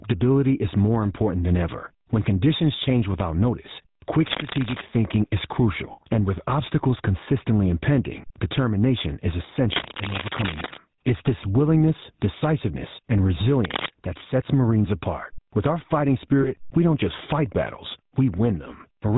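Speech over a GSM full-rate codec link, with the buzzy, gravelly roughness of a coder that drives a vocal-tract model with sparse, regularly spaced pulses, which fits a 13 kbps GSM full-rate stream. On a spectrogram everything stops at a hard ceiling at 4 kHz, and voiced stretches show coarse, smeared harmonics. Gain pumping runs throughout. The gain swings by around 15 dB, so the waveform envelope looks flattened and squashed. This is likely from gain set far too high ahead of a fast limiter. Cable scratch noise appears at 4.26–4.82 s, at 9.73–10.78 s just after "consistently impending determination is", and at 13.65–13.88 s between "this willingness decisiveness and" and "that sets". It is likely from a worn cable or connector being moved, and it is roughly as loud as or louder than the speech. It shows as dense, ragged broadband smears on the spectrogram and irregular spiky bursts on the waveform. 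Lost GSM frames hold the sound as a brief metallic ring at 5.92–5.99 s, lasting 60 ms, which fits three lost frames, and at 16.42–16.49 s between "our fighting" and "we don't just fight", lasting 20 ms, which fits one frame. Each shows as a frozen, repeated spectral slice.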